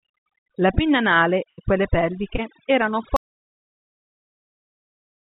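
The speech carries overdone noise removal from start to finish. A noise reducer was pushed too hard. It drives individual frequency bands down to nothing whenever they sit near its noise estimate. Quiet parts of the voice get pulled under with them. The background collapses into near silence scattered with twinkling specks. This sits on top of a telephone-band sound with nothing above 4 kHz, which fits a narrowband call codec.

At 1.49 s, just after "pinna anale", a burst of packet loss begins. It runs to about 1.61 s. Several packets in a row failed to arrive in time. The receiver stretched the last sound forward for roughly 87 ms and let it fade. That fill is heard as a held buzz or fading hiss. The sound then picks up further along. About 90 ms of the original is simply gone.

From 2.36 to 2.41 s there is a short concealed packet loss. A few hundredths of a second never reached the decoder. 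The receiver filled about 24 ms by continuing the previous sound, then blended back into real audio. Roughly 30 ms of the original is missing. It comes through as a brief smear or wobble. A short consonant-like sound can drop out inside it.

At 3.16 s the audio cuts out completely and stays silent to the end. This is an audio dropout to silence. The gap holds plain silence with no room tone at all. That points to lost input rather than a quiet passage. The likely cause is a disconnected device, a failed link or a stray mute. Whatever followed is lost.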